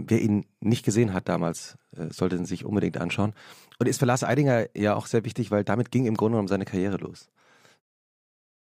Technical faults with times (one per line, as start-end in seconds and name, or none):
none